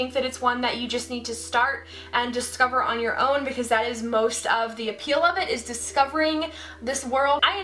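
No technical faults are audible.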